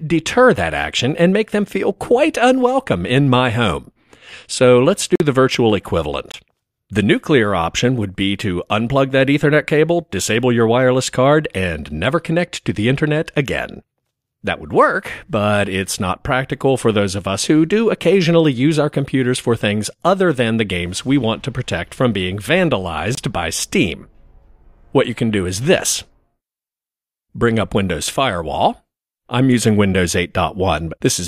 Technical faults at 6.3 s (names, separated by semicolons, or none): block of digital silence